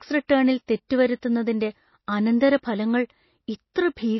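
From start to end the speech carries plainly audible damage of the kind left by MP3 compression, likely at a very low bitrate, about 24 kbps. Nothing survives above 5.8 kHz, so sibilants sound dull, while the remaining band has a watery, swirling texture as weak frequency lines drop in and out between frames. A spectrogram shows a hard ceiling at 5.8 kHz and speckled, patchy energy below it, with gaps that flicker frame to frame.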